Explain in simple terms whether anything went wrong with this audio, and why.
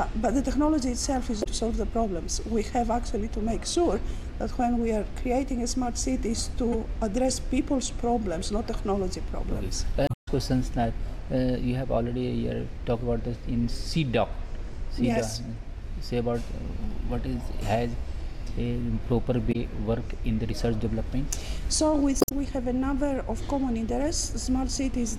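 Damaged data in a compressed stream causes brief chirps or blips at 1.40–1.47, 6.72–6.75, 10.05–10.28, 19.49–19.56 and 22.18–22.32 s. Parts of the compressed file were corrupted, so the decoder lost its place, produced garbled sound, and skipped ahead to the next readable frame.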